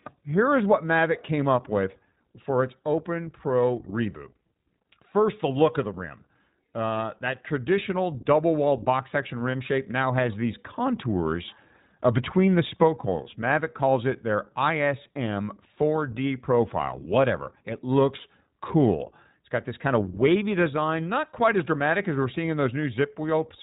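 Throughout, the speech sounds narrowband, rough and somewhat synthetic, with nothing above 4 kHz. This is the iLBC codec, plainly audible, consistent with its 15.2 kbps, 20 ms frame mode.

From 9.52 to 9.56 s, between "double walled box section" and "shape now has these", a brief held, slightly buzzy vowel appears. This is a lost iLBC frame: about 20 ms went missing and the decoder filled it by repeating the last pitch cycle, and the speech recovers at once.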